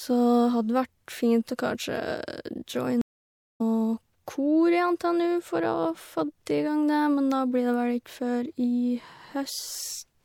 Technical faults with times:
3.01-3.61 stream reconnect

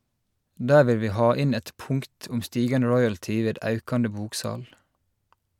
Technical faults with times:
none

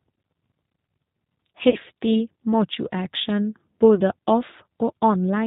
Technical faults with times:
0.00-5.46 G.729 codec
1.70-1.76 VoIP packet loss concealed by the speech codec
3.95-4.01 VoIP packet loss concealed by the speech codec

